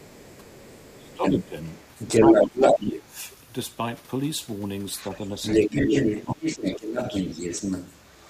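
From 0.0 to 1.48 s, 1.64 to 2.86 s, briefly at 4.95 to 5.18 s, and from 5.42 s to the end, the other side's voice leaks through, likely loudspeaker echo the canceller left in. It ranges from faint to louder than the talker. During overlap at 0.97 to 1.56 s, 2.2 to 3.17 s, 5.53 to 5.93 s and 6.25 to 6.96 s, the talker is suppressed in double talk, dipping by up to about 15 dB, likely because the canceller turned both voices down.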